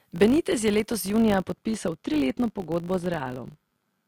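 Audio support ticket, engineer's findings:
Filter restarted on every block, throughout: 50 Hz buzz tracking signal level, which fits 20 ms blocks. Filter state is cleared per block, so each block starts from silence with a transient.

De-emphasis applied wrongly, 1.21 s to end, right after "je letos": dull, muffled sound, about 11 dB down at 10 kHz against 1 kHz. Treble-cut stage is hitting audio without pre-emphasis, or is applied twice.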